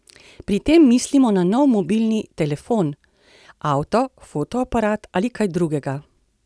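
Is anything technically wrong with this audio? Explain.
No, the recording shows no technical faults and the signal is in sound working order throughout.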